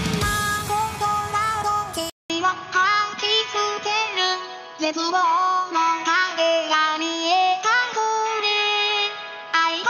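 At 2.10 s the sound drops out for about 200 ms, then returns duller and boxier through to the end, with its level shifted by roughly 5 dB and a new noise floor about 30 dB under the signal. This most likely points to an input switched to a poorer device. A spectrogram shows a brief vertical gap, then energy cut off flat at 6.6 kHz, with a raised background haze; the waveform shows the gap and a changed envelope height.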